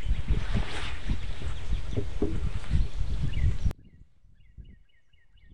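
A recording of sounds that, from 3.71 s to the end, suddenly collapses to a faint trace about 30 dB quieter, with its centre almost gone. The likely cause is one channel inverted, so the material shared by left and right cancels when the pair is summed to mono, leaving only their small difference.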